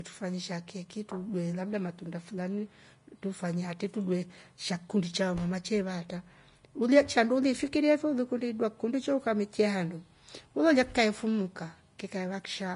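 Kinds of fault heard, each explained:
Vorbis compression: the speech sounds hissy and grainy throughout, with roughened tones and softened consonant attacks. This is likely from low-quality Vorbis coding, at a rate that fits roughly 33 kbps. The coder keeps a smooth spectral outline and quantises the finer detail so coarsely that treble detail becomes noise of similar energy. On a spectrogram nothing appears above 10.5 kHz, harmonics below look speckled and smeared, and waveform onsets look blurred.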